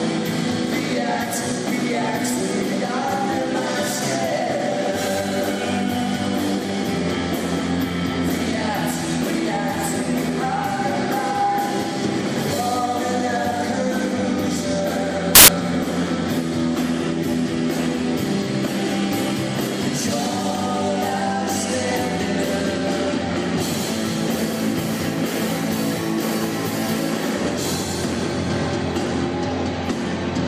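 A short burst of loud, harsh broadband noise replaces the audio from 15.35 to 15.48 s, about 0.13 s. These are samples built from the wrong bytes: the reader misassembled each sample, so rapidly changing low-order bits became the dominant part of every value.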